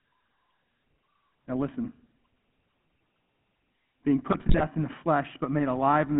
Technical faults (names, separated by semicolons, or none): GSM full-rate codec; GSM bit errors